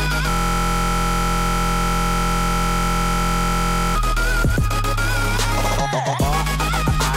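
At 0.30 s the audio locks up in a system hang loop that runs until 3.96 s. The machine or its driver stalled, but the sound hardware kept replaying the same stretch of its ring buffer: a 23.22 ms slice repeating exactly, well over a hundred times. With a buffer that short, the repeats fuse into a steady buzz at about 43.1 Hz, which fits a 1024-sample buffer, rather than a stutter you could count.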